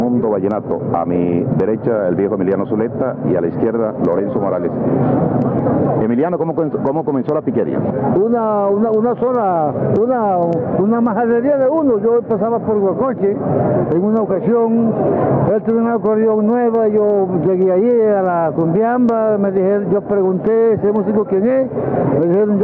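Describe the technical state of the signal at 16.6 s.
At 16.6 s the gain pumping that runs through the whole clip is present: the gain swings by around 10 dB, pulled down on each loud sound so loud and soft parts end up closer in level and the sound is squashed, likely an overdriven input clamped by a fast limiter. Unlike a noise gate, it pulls loud sounds down rather than cutting quiet parts to silence.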